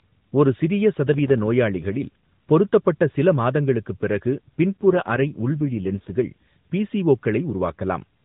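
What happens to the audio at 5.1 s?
An AMR rate drop from 4.74 to 6.16 s: speech turns rougher and more synthetic, consistent with a fall from 12.2 to 5.9 kbps, yet the band stays unchanged and nothing cuts out.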